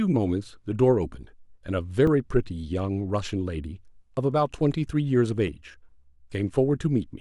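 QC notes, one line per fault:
2.07 s and 5.48 s: underrun with held sample. The output buffer ran dry for about 2.4 ms and then 2.7 ms, and the converter held its last value, so the waveform goes flat and the speech drops out with barely a click at onset. The second gap fits a 128-sample block. A few milliseconds of live audio were skipped each time, so playback resumes past the point where it stopped.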